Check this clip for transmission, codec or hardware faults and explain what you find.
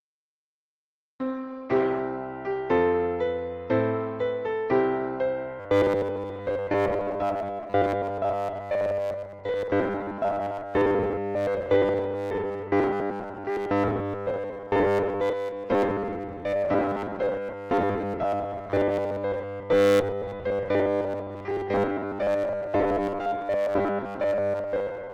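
Two faults are present: a low-quality start, then a robotic buzz from 5.6 s to the end.

From 0 to 2.0 s, this is an adaptive stream starting at a low bitrate. The player began on a cheap version before measuring the connection. Treble is thin and codec artefacts are stronger, which fits Opus at about 16 kbit/s. At 2.0 s the quality jumps, with no gap, to what sounds like 64 kbit/s.

From 5.6 s to 25.1 s there is robotic sound from repeated short buffers, likely caused by audio arriving too seldom so that the software loops its last fragment. Roughly 70 percent of the sound is repeats, producing a rigid metallic 100 Hz buzz, which fits a 10 ms buffer.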